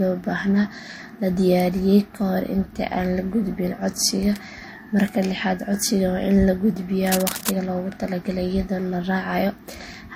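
Transcoding between lossy codecs runs through the whole recording. Two kinds of compression artefact are heard together, and nothing sounds above 16.6 kHz. This likely comes from encoding to something like low-rate MP3 and then re-encoding to a lower-rate Vorbis stream, which spent bits on the earlier damage while adding its own.

Cable scratch noise appears from 7.07 to 7.49 s as a dense, uneven burst of rustling, about 5 dB quieter than the speech. It likely comes from a worn cable or connector being moved, making its contact resistance jump rapidly.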